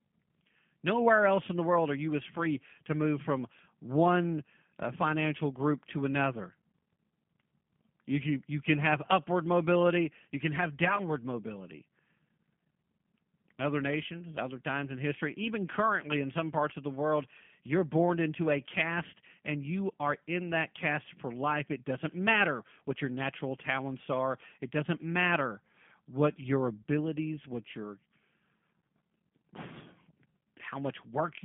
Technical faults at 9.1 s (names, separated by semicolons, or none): G.729 codec